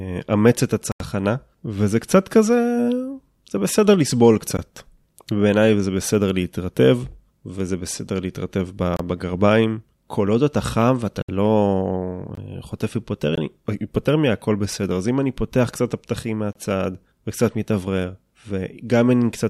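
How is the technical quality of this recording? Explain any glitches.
The speech is interrupted seven times by a block of digital silence, which makes the recording sound glitchy. Each dropout is an abrupt hole where the signal falls to silence and returns with no fade.

The gaps are a tick at 4.57 s (about 13 ms); short holes at 8.97 s (29 ms), 12.35 s and 13.35 s (21 ms each, fitting a 1024-sample buffer), and 16.53 s (26 ms); and longer holes at 11.22 s (64 ms) and 0.92 s (85 ms, fitting a 4096-sample buffer).

These most likely come from the output buffer not being filled in time, so zeros went out in place of audio. The hard edges and dead-silent interior tell them apart from packet-loss concealment, which fills a gap with smoothed or repeated sound rather than cutting to nothing.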